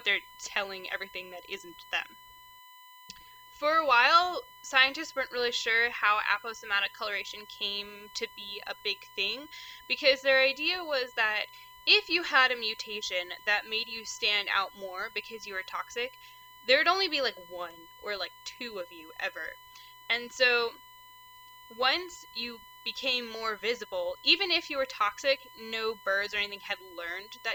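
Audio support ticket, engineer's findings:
USB whine throughout, fixed-pitch tone at 1 kHz sitting roughly 25 dB under the signal. Probably the USB interface or its power/ground: current drawn in 1 ms bus frames leaking into the audio path. Try a ground-isolated hub or separate supply.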